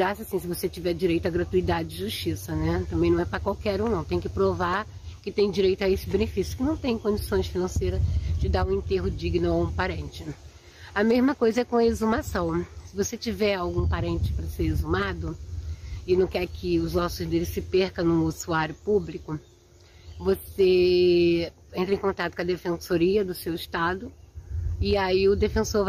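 No technical faults are audible anywhere in this clip.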